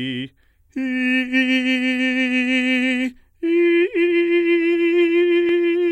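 Nothing goes wrong anywhere in this bit of music, so there's simply nothing here to point out.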